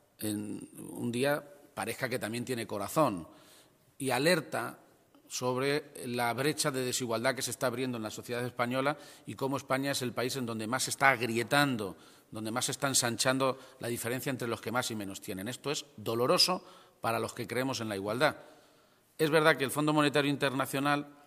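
No technical faults can be heard in this recording.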